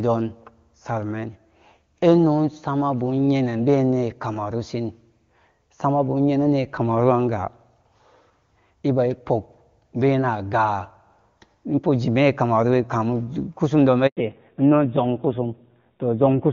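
A speech recording carried as a mobile call, with a handover gap from 14.07 to 14.17 s: for 100 ms no frames arrive while the connection moves between networks, so the voice fades within a few tens of milliseconds and then drops to silence. On a waveform this shows as a flat, near-zero stretch after a short decay. On a spectrogram it is an empty vertical band across every frequency, and whatever was said in that tenth of a second is gone. Right after the gap, from 14.17 s to the end, comes a fallback to narrowband. Before the switch the audio has the wide bandwidth and clean detail of HD Voice (AMR wideband), at a quality that fits its top 23.85 kbit/s mode. After it, nothing remains above 4 kHz. A spectrogram shows a hard horizontal ceiling at 4 kHz from that point on, and the voice sounds duller and grittier, consistent with a low-rate narrowband codec such as AMR-NB at 7.4 kbit/s.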